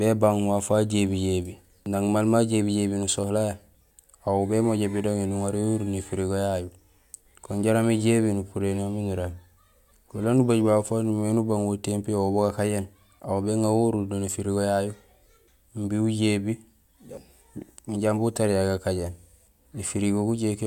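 Speech, with no technical faults audible anywhere in the recording.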